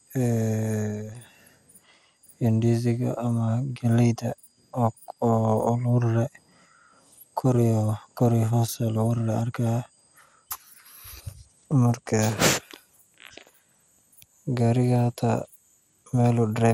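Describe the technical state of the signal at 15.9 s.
At 15.9 s the speech carries MP2 compression damage, present throughout the clip and likely from MPEG Layer II coding at a rate near 80 kbps. Starved sub-bands drop out, leaving a dull, gurgling, granular sound. A spectrogram shows nothing above 16.5 kHz and upper bands flickering on and off.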